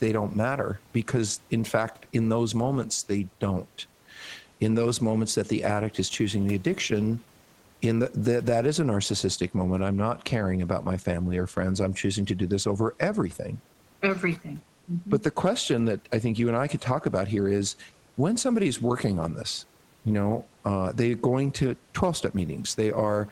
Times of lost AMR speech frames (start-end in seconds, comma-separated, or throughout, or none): none